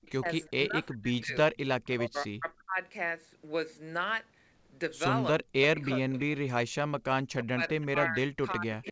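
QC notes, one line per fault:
0.02–0.11 s, 5.41–6.2 s, 7.41–7.86 s, 8.84–8.9 s: echo leak. A delayed copy of the speech returns, 355 ms late at first and then 326 ms late. It is about 30 dB down at the start, about 10 dB down at 5.41 s, and about 15 dB down after that. This is likely a loudspeaker echo that the far end's canceller missed. On a spectrogram, duplicate harmonic traces sit about a third of a second behind the originals. On the waveform, ghost bursts trail the main envelope.
0.12–1.36 s, 1.96–2.78 s, 5.73 s to the end: speech suppressed in double talk. The talker's level dips by roughly 40 dB in pieces, about 0.7 s in total in each of the first two spans. This is likely an echo canceller turning down its own talker along with the echo during overlap. On the waveform the envelope shows sudden gouges and near-silent gaps. On the spectrogram the affected spans have blank vertical notches in a band that tops out at 8 kHz.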